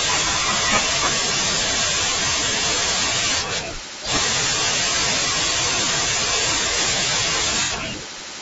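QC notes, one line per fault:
throughout: low-delay AAC compression. The speech sounds plainly rough and grainy, with a hiss-like haze sitting between the harmonics and a thin, slightly artificial quality at the top. This is likely the low-delay AAC used for calls, whose very short frames cannot separate closely spaced pitch harmonics cleanly. At a rate that fits around 32 kbps, too few bits remain to hold the fine structure, so the gaps fill with coded noise and the upper band is only roughly rebuilt.
7.64 to 7.72 s: AAC frame loss with concealment. For a brief stretch the speech turns smeared and noisy, a blurred, slightly phasey patch instead of clean detail. About 60 ms of coded audio went missing, which fits two lost frames, and the decoder covered the hole by reusing the last good spectrum with altered phase and estimated energy. Because the gap is short, the result sounds like a smudge in the audio rather than a dropout to silence.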